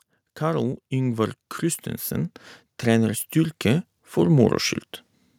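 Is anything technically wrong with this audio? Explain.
Yes. From 0.38 to 4.61 s, automatic gain rising lifts the level by about 11 dB. The gain control judged the input too quiet, so voice and background swell together.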